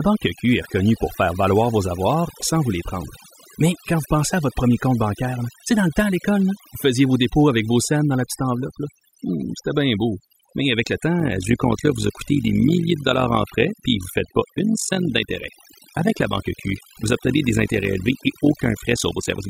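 From the start, the background sits in an unnatural near-silence scattered with twinkling, chirpy specks, and the quieter parts of the speech are hollowed out. This is overdone noise removal: a noise reduction stage set too aggressively pulls individual frequency bands far down or shuts them off whenever they come close to its noise estimate. The low-level detail of the speech falls under that threshold and vanishes along with the noise.

At 11.2 s, right after "avec le", a fast, rough flutter appears and continues to the end, giving the speech a buzzy, robotic tremolo with the level swinging by about 11 dB at a rate of around 50 Hz. This is overlap-add ripple. The audio was split into windowed frames and rebuilt with an overlap whose windows don't add up to a constant gain, so the loudness rises and dips once per frame.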